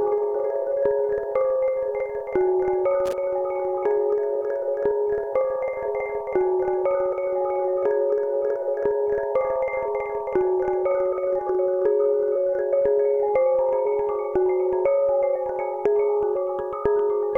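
At 3.06 s a burst of loose connector crackle breaks into the sound and lasts about 80 ms, to 3.13 s. A worn or dirty contact somewhere in the chain lost and regained connection several times in quick succession, chopping the signal on and off. What sets it apart from a single digital click or dropout is its ragged, irregular scratchiness: a cluster of uneven crackles rather than one clean tick or gap.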